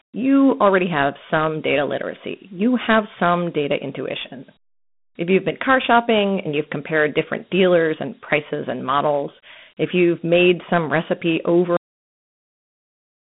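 A speech clip that's been through Dialogic VOX ADPCM for its whole length: the band is squeezed to roughly 150 Hz to 3.6 kHz with nothing above 3.8 kHz, and the coarse 4-bit ADPCM steps leave a plainly audible gritty hiss riding along with the voice. That coarse coding at around 32 kbps is what you'd expect from a phone-menu or voicemail system. Then there's a cut-off end at 11.77 s. The sound stops mid-stream and drops straight to digital silence with no natural decay, staying dead until the file ends at about 13 s. It sounds like the final buffers were simply never written out, so the tail just vanishes.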